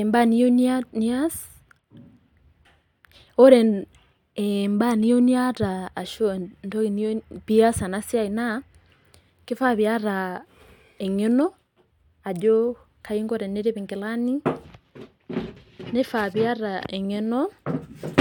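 Nothing in the speech recording stood out as a technical problem on listening.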